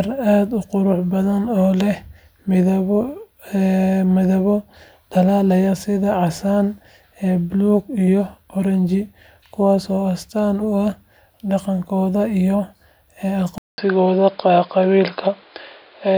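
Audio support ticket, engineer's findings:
Speech turns dull and boxy from 13.58 s to end, after a 200 ms dropout at the switch. Nothing above 5.1 kHz, new faint noise floor well under the speech, level about the same. Likely input switched to a poorer device with narrower bandwidth.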